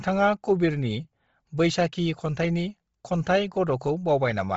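Throughout, the speech stops at 7.7 kHz with a breathy, grainy top, likely heavy Bluetooth LC3 compression; noise-filled highs distinguish it from a clean low-pass.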